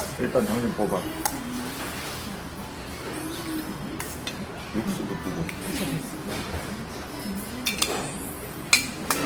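Throughout the clip, Opus compression, likely at a low rate near 16 kbps, leaves tones grainy and noisy rather than the swirling holes of MP3, with bandwidth still reaching 20.2 kHz.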